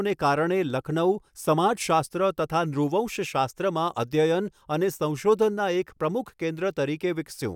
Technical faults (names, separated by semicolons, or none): none